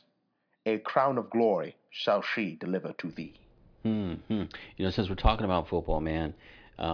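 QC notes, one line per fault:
Nothing stood out on listening to this speech clip.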